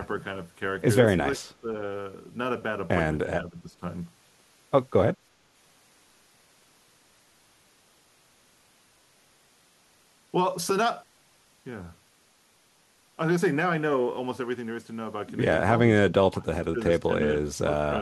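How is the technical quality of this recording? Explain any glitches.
The recording has three short dropouts, at 1.25–1.68 s, 3.26–3.82 s and 16.09–16.79 s. They are likely speech suppressed in double talk: an echo canceller turning the talker down while the far side also spoke. The level sinks by roughly 10 to 30 dB, with the deepest drop at the end. These show as notched dips in the waveform and as faded, broken bands on a spectrogram.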